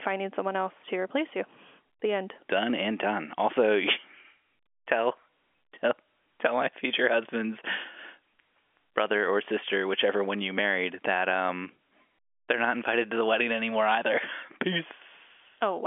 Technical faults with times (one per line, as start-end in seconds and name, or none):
none